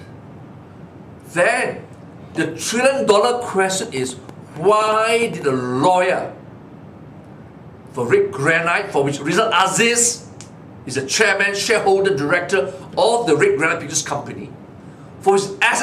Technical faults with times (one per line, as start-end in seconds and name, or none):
3.83-5.50 train of clicks